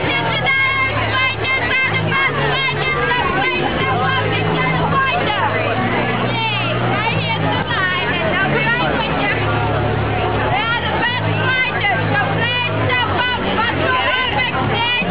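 No technical faults are audible.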